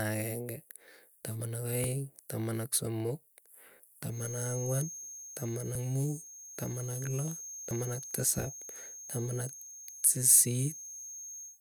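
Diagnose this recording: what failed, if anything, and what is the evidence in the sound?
Speech jumps forward abruptly at 1.84, 3.80, 5.75, 7.71 and 9.67 s, each time skipping a few tens of milliseconds with no gap, every 2 s or so. This is likely audio missing between chunks at the buffer stage, where each handover between recording chunks drops a short slice.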